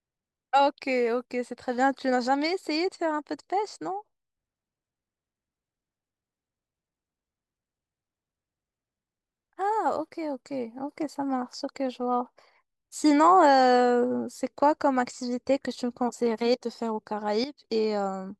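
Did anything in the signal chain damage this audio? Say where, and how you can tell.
Yes. A sudden gain jump hits from 17.44 to 17.64 s. Speech and background drop together by about 12 dB. The likely cause is an unramped digital gain step in processing.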